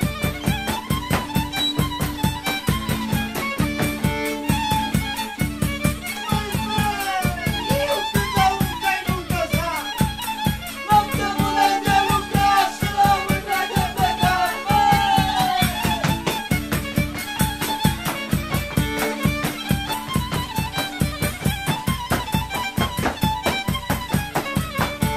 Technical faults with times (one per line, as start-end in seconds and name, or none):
none